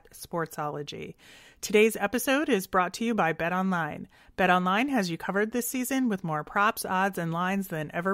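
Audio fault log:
Nothing to log here, as this bit of speech comes across without a single fault to point to.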